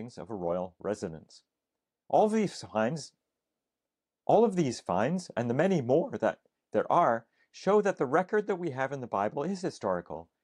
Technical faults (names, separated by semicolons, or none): none